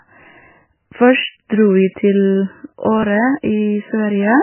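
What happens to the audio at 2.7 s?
At 2.7 s the speech sounds dull and watery, with a swirling, metallic edge on s sounds and nothing audible above 3 kHz, as it does throughout. This is likely heavy MP3 compression at a very low bitrate, around 9 kbps: the encoder cuts the treble and drops weak frequency components that flicker from frame to frame.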